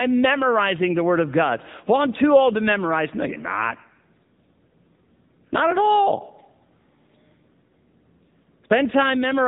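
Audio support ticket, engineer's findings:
AMR narrowband mobile codec, whole clip: buzzy, synthetic speech, plainly audible damage fitting a low mode near 8 kbps. Spectrogram shows a hard ceiling at 3.8 kHz, nothing above.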